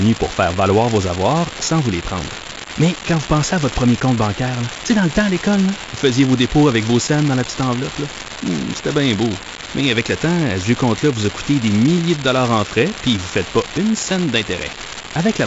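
A steady crackle, a fine fizz of identical spikes, runs through the whole speech clip and carries on unchanged in the pauses, where there is no speech to mask it. That pattern points to an unreliable data bit: one marginal data line flips its bit in a random share of samples, and each wrong bit adds a spike of the same size. Under it, the G.722 wideband telephone coding stays audible as nothing above about 7.7 kHz and a slightly noisy lower band, which fits a 56 kbit/s mode.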